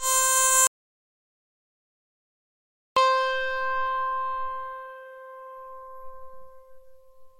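Music, with an audio dropout to silence running from 0.67 s to 2.97 s, so about 2.29 s of the performance is simply missing. The sound cuts off mid-flow and returns just as abruptly, and the gap between is silence with no residual room tone or noise floor. That points to the input signal being lost while recording continued, most likely a disconnected source, a failed link or an accidental mute, with silence written in its place.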